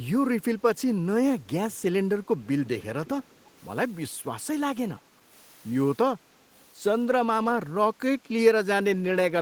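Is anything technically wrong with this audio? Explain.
Yes. From 2.24 to 2.85 s and again from 3.06 to 3.51 s, a faint copy of the speech trails it by about 300 ms, first roughly 20 dB down, then fainter still. This echo leak likely comes from a loudspeaker-side echo canceller letting picked-up sound return.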